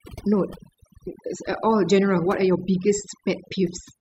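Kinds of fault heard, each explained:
Overdone noise removal: an over-aggressive denoiser runs through the whole speech clip, switching off individual frequency bands near its noise estimate, leaving near-silent gaps with twinkling specks; unlike a noise gate, it removes bands separately rather than muting everything together.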